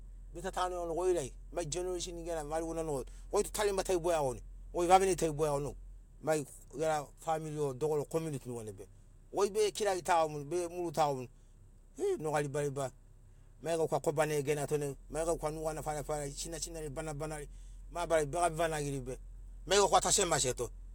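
No technical faults are audible.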